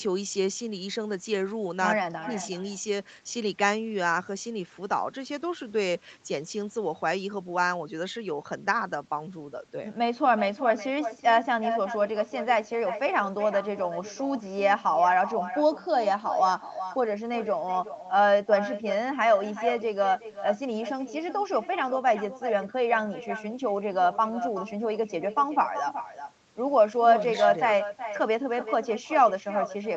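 From start to finish, the speech carries echo with no canceller. A quieter copy, about 11 dB down, trails each phrase by roughly 0.4 s.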